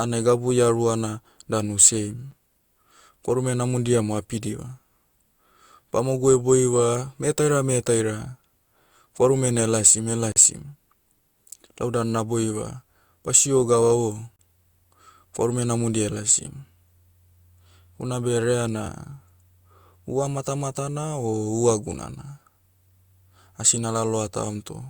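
Three brief, hard-edged dropouts to silence break up the speech: a very short one at 2.31 s (about 8 ms), a longer one from 10.32 to 10.36 s (about 40 ms), and another from 14.36 to 14.39 s (about 31 ms). Each is a gap between stream segments, where adjacent chunks' timestamps don't meet and the player pads the hole with silence. Nothing is lost, but the speech jolts. Their spacing points to 4-second segments.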